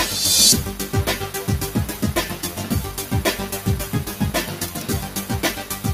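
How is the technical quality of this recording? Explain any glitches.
The technical quality is compromised by one fault that runs through the whole recording. A noise suppressor applied to music or sounds is active from start to finish. It was built to clean up speech, so it mistakes sustained tones, ambience and decay for noise. It lets the onsets through, then pulls down what follows. The level swings by about 10 dB. Held sounds sink and tails vanish early. The result pumps and flutters, and the sound feels thin.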